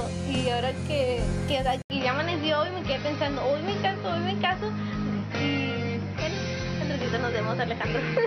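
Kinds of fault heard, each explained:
Input switched to a poorer device: at 1.82 s a short gap of 80 ms opens, and from there to the end the sound turns duller, with nothing above 6 kHz, matching level and a faint new noise floor, likely from a narrower-band microphone taking over.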